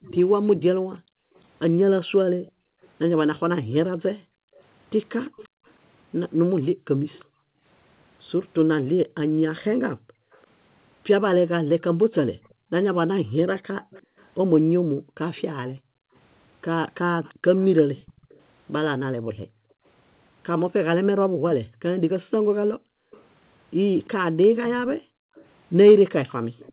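From 0.02 to 18.41 s a faint delayed copy of the speech trails the original by about 343 ms, sitting roughly 25 dB below it. This is echo leak, likely from a far-end loudspeaker whose echo canceller let part of the microphone pickup return down the call.

Between 0.99 and 26.51 s the background is gated by the echo canceller. While it judges loudspeaker output to be present, it pulls the microphone down by as much as about 40 dB. The room tone dips or vanishes, for around five seconds altogether, and comes back when the suppression releases. All of this sits within the narrow 4 kHz band of the G.711 call path.

The echo leak returns from 23.12 s to the end, again about 343 ms behind the speech and slightly stronger, roughly 20 dB down.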